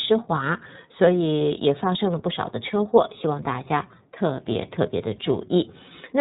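Speech run through the iLBC codec throughout: nothing above 3.8 kHz survives, and independent frame-by-frame excitation coding, consistent with 30 ms frames, leaves plainly audible synthetic roughness.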